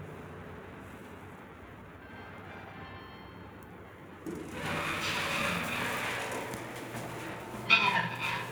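Periodic clock jitter runs throughout: interference wobbling the converter clock at around 1 kHz puts sidebands on every component, giving a rough, metallic edge.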